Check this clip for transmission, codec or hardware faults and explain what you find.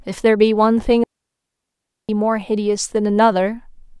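A digital wireless dropout cuts out the speech from 1.04 s to 2.09 s, a hole of about 1.05 s. The receiver lost too much of the incoming data stream to rebuild the audio and muted its output instead of playing corrupted samples. It is heard as an abrupt stretch of near silence, entered and left with a very short fade and no hiss, crackle or noise burst on either side. The waveform shows a flat line between those times, and the spectrogram shows a clean dark vertical gap across all frequencies.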